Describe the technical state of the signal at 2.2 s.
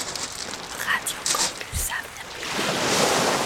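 Damaged data in a compressed stream hits the signal from 2.21 to 2.23 s. Bytes in that stretch of the compressed data are corrupted, so the decoder either misreads the affected frame or throws it out, loses its place in the stream, and has to hunt for the next valid frame header before decoding can resume. In the sound, this comes through as a brief, unnatural blip or chirp lasting about 20 ms, abruptly breaking the flow of the audio.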